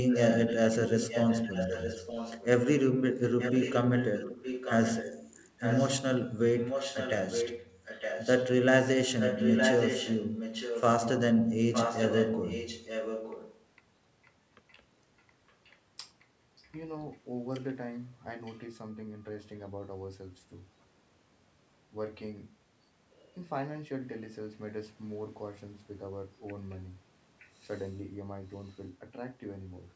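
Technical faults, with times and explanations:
0.12 to 16.68 s and 18.45 to 18.57 s, echo leak: a copy of the speech returns about 0.91 s late, roughly 10 dB below it through the long stretch and only a faint scrap later, likely because a far-end loudspeaker's echo canceller let its microphone pickup through.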